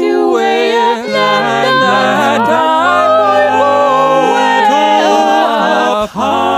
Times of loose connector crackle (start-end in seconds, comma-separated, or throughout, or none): none